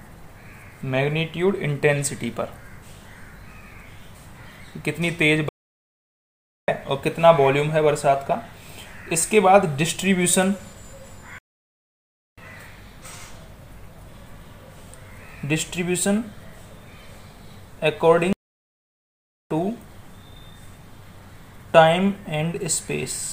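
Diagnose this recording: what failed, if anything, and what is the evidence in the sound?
Playback stall at 5.49, 11.38 and 18.33 s: silence of 1.19, 0.99 and 1.18 s, then the sound resumes. This points to a likely buffer underrun.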